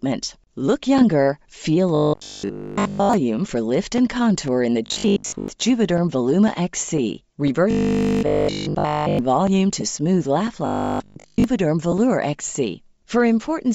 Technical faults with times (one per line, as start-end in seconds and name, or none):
0.00-13.74 Bluetooth LC3 compression
0.48-13.48 periodic USB or driver dropouts
1.95-3.13 robotic sound from repeated short buffers
4.86-5.48 robotic sound from repeated short buffers
7.71-9.19 robotic sound from repeated short buffers
9.81 lost LE Audio frames
10.66-11.44 robotic sound from repeated short buffers
11.92 lost LE Audio frames